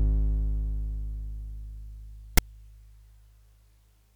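A short, harsh burst of rasping static cuts into the music at 2.37 s, lasting only about 11 ms with hard edges and sitting off-centre rather than as a rounded click. This is file tags played as audio: a block of text metadata was read as sample data.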